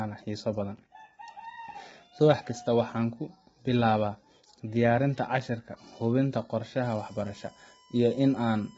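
Throughout, the speech sounds rough and grainy, with noise between the harmonics and nothing above 7.8 kHz: heavy damage from low-delay AAC compression, likely AAC-ELD at a rate that fits about 16 kbps. From 6.84 s to the end, a steady 1 kHz tone sits well below the speech. This USB whine comes from the bus's 1 ms frame current leaking into the audio path.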